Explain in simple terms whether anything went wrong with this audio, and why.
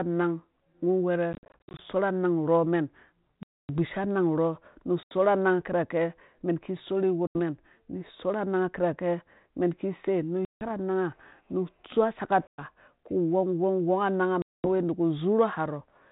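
Packet loss on an ADPCM call: chunks of the stream dropped out, leaving silent gaps, after which the decoder briefly lost track and the speech came back slightly distorted. The gaps are at 1.33 s (a scattered run of short holes), 3.43 s, 5.03 s, 7.27 s (just after "mɛn ki sorhi"), 10.45 s, 12.47 s and 14.42 s.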